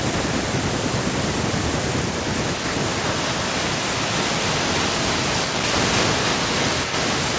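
From 5.9 s to the end of the clip, a second, delayed copy of the speech trails the talker by about 0.32 s at a level only a few decibels below the voice, giving a doubled, smeared sound. This is an echo leak, most likely from a far end on loudspeaker whose echo canceller let its microphone pickup return down the line. On a spectrogram each syllable's harmonics reappear shifted right by that 0.32 s, all below the 8 kHz ceiling of the call band; the waveform shows overlapping, repeated envelopes.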